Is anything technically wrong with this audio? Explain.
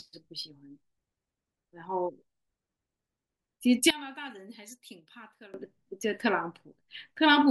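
Yes. From 3.90 to 5.54 s the speech falls by about 21 dB, with one channel inverted as the likely cause: the shared centre cancels when summed to mono, leaving a faint residue rather than the silence of a dropout or the intact tone of a simple level dip.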